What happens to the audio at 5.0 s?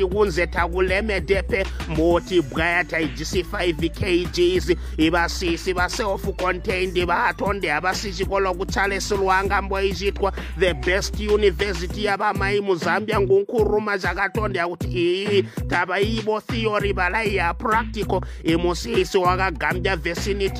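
Nothing goes wrong at 5.0 s; the audio plays through that moment intact, with no dropout, click or other fault.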